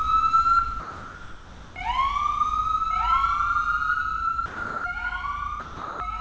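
A recording of everyday sounds, carried over a call path with nothing above 8 kHz, fitting G.722 at 64 kbps. A doubled audio track runs throughout. A second full-band copy trails about a second behind, about 5 dB quieter. It has no decay or room colour, so it sounds like a duplicate, not an echo. The likely cause is a slower second capture path mixed back in. The sound is also dropped by the voice detector three times: 0.80 to 1.76 s, 4.46 to 4.84 s, and 5.60 to 6.00 s. Each gap is filled with steady comfort noise until the sound returns. The detector likely mistook these sounds for background and stopped sending.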